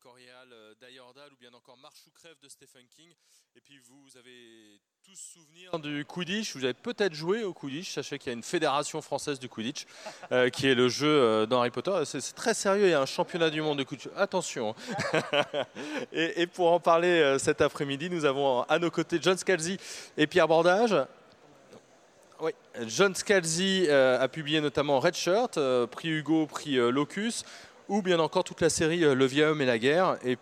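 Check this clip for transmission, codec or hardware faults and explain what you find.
One fault is present. From 0.0 to 5.73 s the sound drops by about 24 dB and turns faint, likely because one channel is inverted and its shared content cancels in mono.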